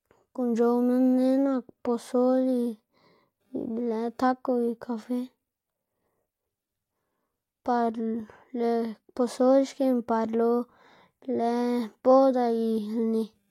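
No technical faults can be heard anywhere in this speech recording.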